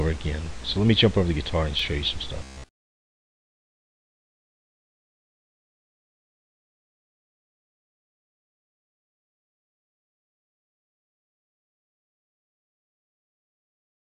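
The audio has a repeated buffer at 1.79 s: a 2.67 ms chunk, which fits a 128-sample buffer, plays one extra time, and the hard join gives a brief click. From 2.43 s to 5.00 s there is robotic sound from repeated short buffers: a rigid, metallic buzz pitched at 66.7 Hz replaces most of the real signal, likely because a 15 ms buffer is looping while incoming audio is skipped.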